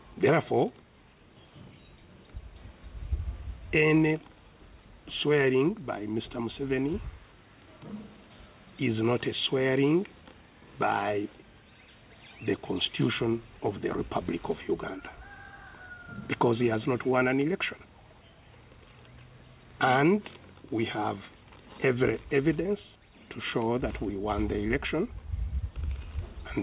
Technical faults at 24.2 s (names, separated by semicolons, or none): none